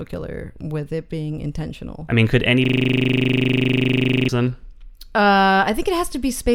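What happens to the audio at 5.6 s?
Nothing goes wrong at 5.6 s; the speech continues intact through that moment, with no dropout, click or distortion.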